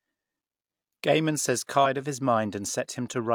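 At about 1.81 s there's a short burst of damaged data in the compressed stream, lasting roughly 50 ms until 1.87 s. A stretch of the encoded speech got corrupted, so the decoder couldn't make sense of those frames and had to hunt for the next clean frame boundary before it could lock on again. What you hear is a quick glitch in the speech right there, a chirp, squawk, click or short hole, gone almost as soon as it starts.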